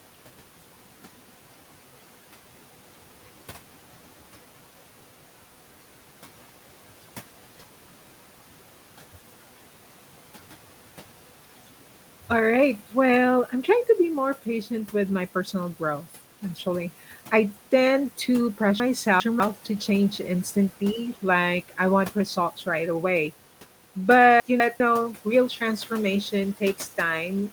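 Running through the whole clip are converter idle tones: an undithered delta-sigma converter falls into repeating patterns and leaves a faint whistle around 1.5 kHz, about 28 dB below the speech. It's most exposed in pauses, sitting under the room noise.

At 18.8 to 19.4 s, between "actually I tend to" and "to change instantly like", there are chunks out of order. A 200 ms chunk plays two chunks late, so it sounds jumbled. The same happens at 24.4 to 24.8 s, one chunk late.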